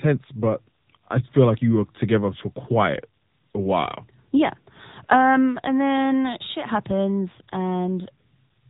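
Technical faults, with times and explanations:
Throughout, AMR narrowband mobile codec: a hard spectrogram ceiling at 3.8 kHz, and buzzy, synthetic speech from the sparse pulse model, which fits roughly 8 kbps.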